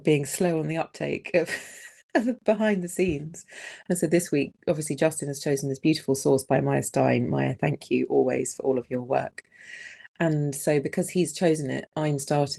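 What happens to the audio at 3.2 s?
Nothing goes wrong at 3.2 s: the sound there carries on intact, with no dropout, glitch or distortion at that point.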